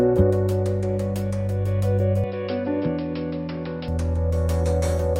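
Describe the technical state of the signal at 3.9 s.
At 3.9 s the signal is just recovering from what is likely an input switched to a poorer device, spanning 2.24 to 3.88 s. During that stretch nothing above 5.4 kHz comes through, the level sits roughly 5 dB lower, and a fresh noise floor appears about 35 dB under the signal. At 3.88 s the full band returns with no gap. A simple filtering or codec bandwidth drop would not shift level and background noise together like this.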